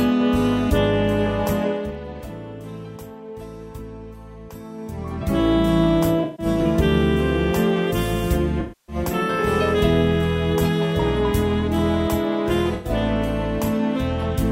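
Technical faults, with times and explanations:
1.63 to 2.00 s, zipper noise: the level drops by roughly 15 dB, but it moves in hard 2 dB steps, around 20 a second, instead of gliding. Every step leaves a small click, so you hear a quick zipping tick riding on the sound as it fades.
6.23 to 6.46 s, 8.60 to 8.96 s and 12.74 to 12.90 s, AAC frame loss with concealment: chunks of about 150 ms, 280 ms and 110 ms go missing, and the decoder patches each gap from the last good spectrum. Each patch comes out as a smeared, noisy or phasey stretch, longest at 8.60 s.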